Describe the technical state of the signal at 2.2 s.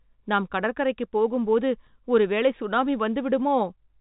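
At 2.2 s the speech is intact, with no fault present, only the narrow band-limited sound of ordinary telephone coding.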